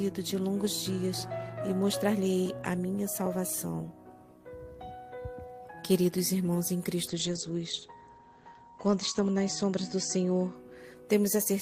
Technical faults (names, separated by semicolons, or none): chunks out of order; call bitrate drop